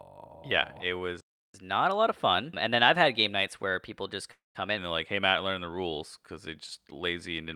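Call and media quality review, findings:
Playback stall, 1.21–1.54 s: speech cuts to dead silence for about 0.33 s, then resumes at the exact point it stopped. The likely cause is player buffer underrun or a blocked audio thread. Unlike a call freeze, the gap is clean silence with no smeared tail of the last sound, and nothing is skipped.

Catch-up at higher speed, 1.54–4.78 s: directly after the stall, speech runs at 1.1x with pitch raised by roughly one and a half semitones, then drops back to normal. The player is resampling its backlog to recover the lost 0.33 s. This differs from a time-stretch catch-up because pitch rises along with tempo. It also differs from a naturally fast talker, since the voice timbre shifts upward.

Call audio freeze, 4.31–4.57 s, inside the sped-up stretch: the last sound is held as a fading buzz or hiss that decays into roughly 0.16 s of silence, about 0.23 s in all, and speech resumes where it left off with nothing missing. 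The likely cause is delayed packets and an empty jitter buffer, which adds about 0.23 s of delay. It is distinguished from the stall by the concealment fill before the silence, instead of an abrupt cut.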